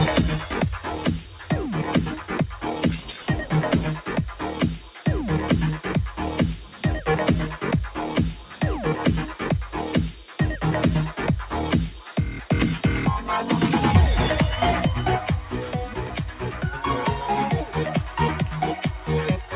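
A speech-tuned noise suppressor left running on non-speech material keeps riding the level by around 10 dB, so held sound and tails pump and thin while attacks pass. The suppressor cuts sustained sound by about 8 dB at 0.44 to 5.06 s, 8.39 to 8.62 s, 10.12 to 10.39 s, 12.0 to 12.5 s and 15.42 to 19.54 s, and by about 7 dB at 6.64 to 6.84 s, dulling decays there. The audio is also band-limited to 4 kHz, which fits a narrowband G.711 call path.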